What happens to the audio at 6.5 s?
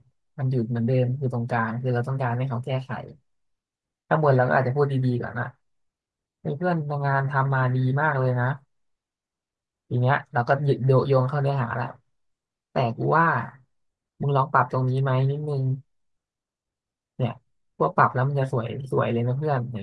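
Nothing goes wrong at 6.5 s; the speech there plays through intact, with no dropout, click, distortion or other audible fault.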